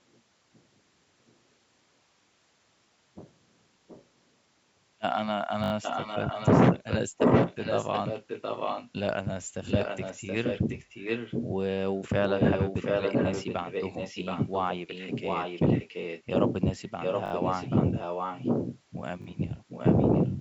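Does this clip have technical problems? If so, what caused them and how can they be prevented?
Yes. The speech has two kinds of fault.

Echo leak: a delayed copy of the speech trails it by 725 ms at 3.88–4.05 s, 5.82–8.91 s, 9.66–11.48 s, 12.23–16.55 s, 17.0–18.8 s and 19.68–20.32 s. It is faint at first, about 25 dB below the speech, then only about 5 dB below for most stretches, and about 15 dB below at the end. The likely cause is a far-end loudspeaker whose echo canceller let its microphone's pickup return. On a spectrogram the speech's harmonic bands reappear as a second, fainter set 0.725 s later, overlapping the live speech. Prevention: the far end should use a headset, or the echo canceller should be given a correct delay estimate and allowed to adapt.

Repeated buffer: the same tiny slice of sound repeats in a quick stutter at 5.64–5.72 s (played four extra times), 17.26–17.32 s (three extra) and 19.22–19.26 s (two extra). 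The repeats fit a 20 ms buffer, replayed when fresh audio arrived late. On a waveform, identical 20 ms segments sit side by side with an abrupt step at each join, and a spectrogram shows thin vertical lines there. Prevention: a larger jitter buffer or a more stable network and CPU supply would let new audio arrive in time.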